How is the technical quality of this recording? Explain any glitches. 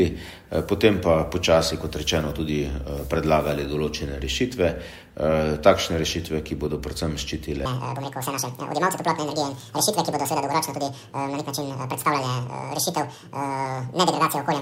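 The recording has one clear fault covering its second half.

Section at the wrong speed, from 7.66 s to the end at 14.62 s: the audio plays at about 1.91 times its original rate. This is likely the result of an editor or player clocking that stretch against the wrong reference. Because speed and pitch are tied together, everything jumps abruptly upward by roughly ten semitones, nearly an octave, and sounds squeezed, chipmunk-like and rushed for the remainder of the clip.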